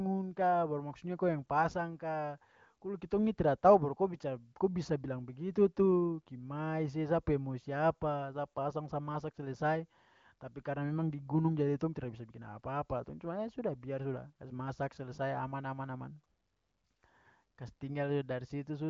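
No technical faults occur at any point in the speech, so there is nothing to place in time order.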